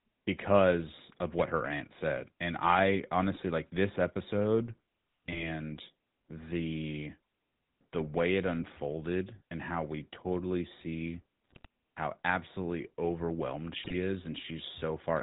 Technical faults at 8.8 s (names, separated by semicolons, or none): GSM full-rate codec